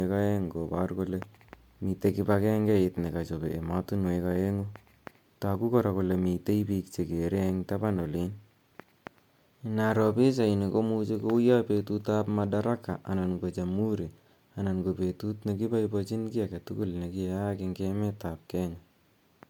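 From start to end, the speech sounds swirly, hollow and smeared, with blurred consonant onsets and nothing above about 19.9 kHz. This is generation loss, likely from repeated MP3 coding, around ten times, at a rate that fits 128 kbit/s, each pass adding fresh quantisation. A single encode at that rate wouldn't sound this degraded.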